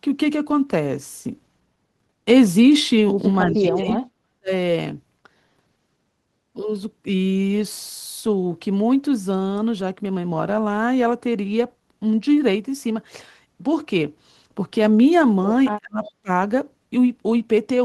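Speech with two kinds of fault. From 3.45 to 4.51 s the voice sinks by roughly 40 dB across about a second, then again from 15.78 to 16.0 s (roughly 30 dB) and briefly from 16.22 to 16.29 s (roughly 35 dB). This is speech suppressed in double talk, likely an echo canceller ducking the near talker while the far side also speaks. Unlike a network dropout, the level is pulled down rather than replaced by silence or glitches. At 3.89 to 3.94 s and 16.04 to 16.12 s a faint copy of the voice arrives about 347 ms late, around 20 dB below the speech. This is echo leak, likely residual loudspeaker pickup that the canceller failed to remove. What separates it from room reverberation is the fixed, distinct delay and the isolated scraps, where reverberation would be a smooth decaying tail.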